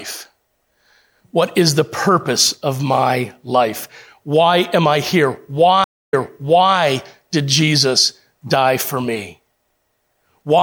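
Right after "am I here", at 5.84 s, there's a stream reconnect: the connection dropped and the audio goes silent for 0.28 s. A fresh decoder then picks up 0.63 s earlier, so you hear that stretch of speech repeat, which settles by 6.75 s.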